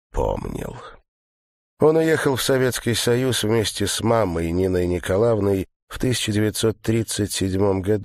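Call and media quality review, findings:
No faults found in the clip. No symptom, component or mechanism to report.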